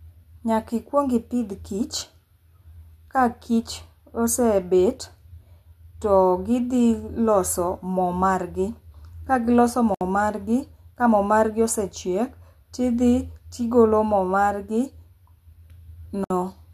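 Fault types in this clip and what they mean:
gap at a join of encoded pieces: the speech was encoded in separate pieces and joined untrimmed, so encoder start delay and last-frame padding leave silences, about 65 ms at 9.95 s and 60 ms at 16.24 s. On a waveform, flat dropouts with smeared edges; on a spectrogram, thin vertical blank bands.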